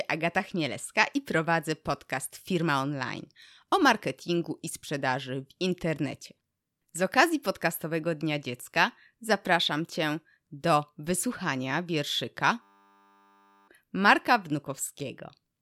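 At 12.62 s, right after "do wysłuchania wierszyka", a system hang loop repeats a 10 ms slice until 13.68 s, giving a steady 100 Hz buzz while about a second of speech is lost.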